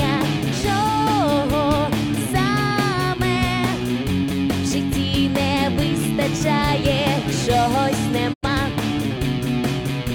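At 8.32 s a digital broadcast dropout mutes the sound with a fade of about 20 ms, and it returns at 8.47 s. The receiver likely rejected corrupted frames, with the gap pointing to about two lost frames. A waveform shows a brief flat hole, and a spectrogram shows a clean vertical blank band.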